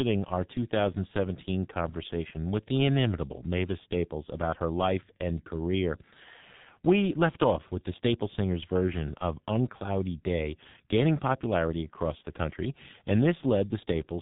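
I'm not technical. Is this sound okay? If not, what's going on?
No. From start to finish the speech sounds muffled and hoarse, as if heard through an old telephone, and consonants come out smeared. This is the G.723.1 codec, an early internet-phone format that shrinks speech heavily to save data. It discards everything above about 3.8 kHz, which removes the crisp detail, and it rebuilds the voice in coarse 30 ms chunks, which blurs quick sounds.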